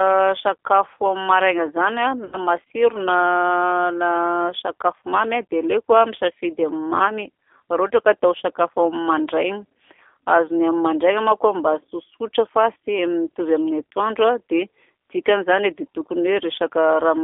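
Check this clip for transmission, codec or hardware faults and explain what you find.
Two faults are present: G.729 coding through the whole clip, and one packet-loss gap concealed by the codec.

Throughout, the speech passes through a G.729A codec at 8 kbit/s on a 300 Hz to 3.5 kHz line band. The decoder rebuilds each 10 ms frame from a vocal-tract filter, a pitch predictor and a few pulses, so the speech sounds plainly rough, thin and synthetic, with nothing bright above the band edge.

From 2.25 to 2.38 s, just after "maraina zany", VoIP packet loss concealed by the speech codec removes about 80 ms of audio, which fits four 20 ms packets. The decoder extends its last pitch and filter at falling gain, producing a brief, fading smear that stays weak or distorted as the speech resumes.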